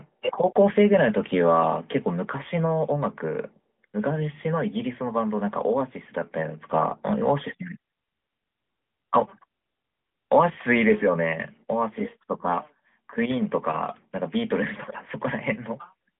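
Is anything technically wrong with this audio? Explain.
No, nothing stood out as technically wrong on listening to this speech.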